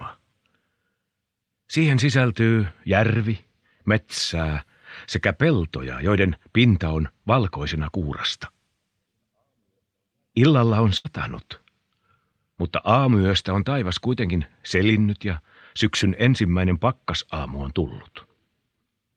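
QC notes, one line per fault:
3.17 to 3.21 s, short concealed packet loss: about 20 ms of audio failed to arrive in time, and the receiver bridged it by extending the preceding sound for 19 ms before blending back. It is heard as a brief smear or wobble. A spectrogram shows a thin, slightly blurred vertical sliver, with harmonics or noise simply continued across it.
10.97 to 11.06 s, burst of packet loss: roughly 80 ms went missing in a row, and 72 ms of it was filled by carrying the last sound forward while fading it. The result is a held buzz or fading hiss, then a jump ahead. The waveform shows a decaying envelope, and the spectrogram shows frozen, smeared bands.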